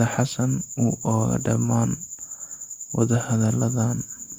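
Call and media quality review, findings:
No audible faults found in the speech signal, with level, continuity and timing steady throughout and nothing requiring attention in the transport or playback chain.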